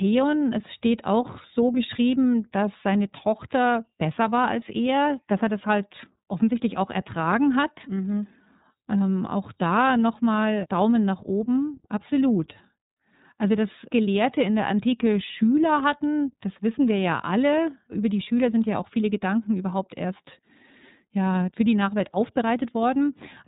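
iLBC codec damage runs through the whole clip: the speech is band-limited with nothing above 3.8 kHz, and each block is coded independently, which fits iLBC's 30 ms frames at around 13.33 kbps, leaving the speech plainly rough and slightly synthetic throughout.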